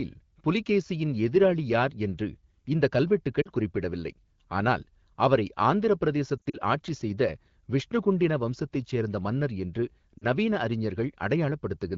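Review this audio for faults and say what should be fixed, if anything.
Lost AMR speech frames cause brief dips and warble at 3.41 to 3.49 s, 6.37 to 6.57 s and 10.17 to 10.26 s. Corrupted frames failed their checksum. The decoder repeated the last good frame with falling gain. The middle event is scattered short gaps. Better radio error protection would prevent this.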